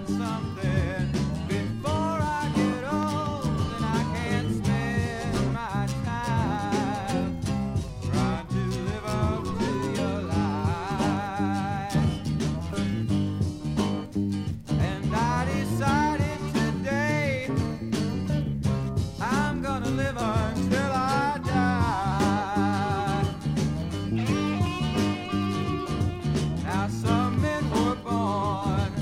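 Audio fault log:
0.58–1.46 s, 7.89–9.68 s and 20.22–22.12 s, drift correction step: The sound abruptly slows and drops in pitch, then snaps back to normal at the end of each span. Speed falls by 6.33 percent and pitch by 113 cents, a little over a semitone flat. Both shift together, so the change is a rate change, not a pitch effect. This is likely clock-matching software changing the playback rate in one step to rebalance its buffer.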